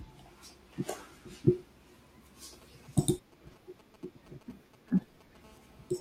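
Speech, with a nearby 2G phone leaking into it. From 2.53 to 5.46 s there are GSM signalling bursts: a galloping dit-dit-dit of brief 217 Hz buzzes, sitting somewhere around 25 dB under the speech. That's the handset firing short groups of radio bursts, which the audio circuitry rectifies into sound. At 5.46 s it settles into steady GSM phone buzz, running to 5.96 s. It's a harsh, harmonic-rich 217 Hz rasp about 29 dB below the speech, which points to the phone now transmitting continuously as in a call, one burst every frame, demodulated the same way.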